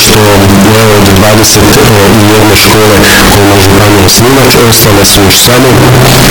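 From the first moment to the end, the sound is buried under very loud, harsh distortion, and quiet stretches come through as loud as everything else. The likely cause is signed and unsigned mixed up in 16-bit samples: with the top bit flipped, every pass through zero jumps across the full range. On a waveform this shows as a dense slab with little variation in level; a spectrogram shows dense broadband energy filling every frequency.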